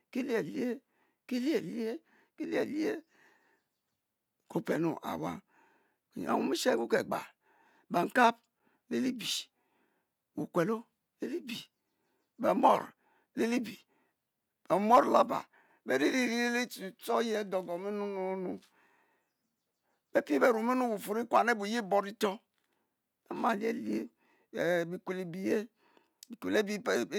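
At 8.59 s, just before "le li bie", and again at 18.60 s, a gap between chunks cuts in: a hard-edged hole of about 6.5 ms where joins between 10-second blocks leave silence. Unlike a dropout, no speech is lost, and it resumes exactly where it stopped.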